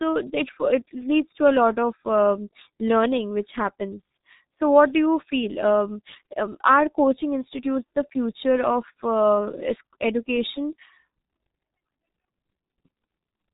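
The speech runs through the G.723.1 codec for its whole length, a coarse telephony coder whose heavy damage points to a rate near 6.3 kbit/s. Nothing above 3.8 kHz survives, and its slow voice model leaves the speech muffled and hoarse, with smeared consonants.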